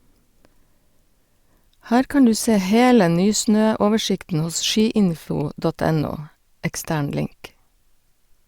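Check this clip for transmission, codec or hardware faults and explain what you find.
No faults turn up in the speech signal, whose continuity and timing stay steady throughout.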